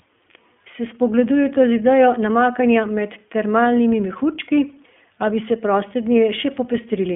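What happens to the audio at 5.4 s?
At 5.4 s, as throughout, the speech passes through the iLBC codec, which rebuilds each 20 ms frame's excitation independently, consistent with its 15.2 kbps mode. Nothing above 3.6 kHz survives, leaving a thin telephone-band sound with a plainly audible rough, synthetic edge.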